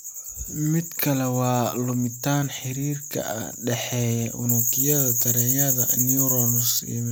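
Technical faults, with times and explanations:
4.49–6.79 s, pre-emphasis left on: a treble boost following the 75 µs FM curve was never undone, so 10 kHz sits about 14 dB above 1 kHz and the speech turns thin, bright and sibilant. On a spectrogram the upper bands brighten sharply across that span.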